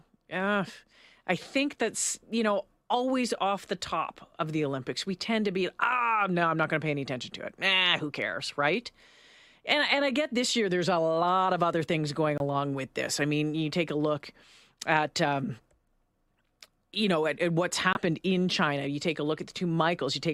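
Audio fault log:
12.38 s (24 ms) and 17.93 s (44 ms): corrupt frame muted. Each likely a single rejected frame swapped for silence; abrupt flat-line waveform gaps, blank vertical spectrogram strips, timing unchanged.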